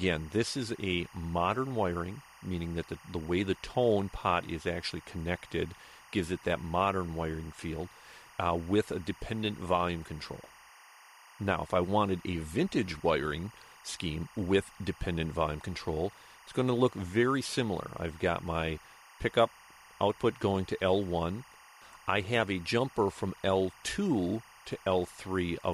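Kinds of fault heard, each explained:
Timecode bleed: linear timecode leaking in throughout, a chirping warble alternating near 1 kHz and 2 kHz, about 25 dB below the sound, at 23.976 frames per second.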